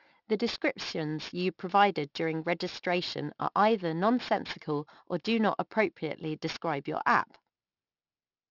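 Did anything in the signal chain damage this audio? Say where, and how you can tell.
Yes. The aliasing runs through the whole clip and comes from sample-rate conversion. Sibilants sound gritty and metallic, and energy folds back around 6 kHz, which fits an unfiltered drop to a 12 kHz rate. The false tones sit roughly 15 dB below the speech.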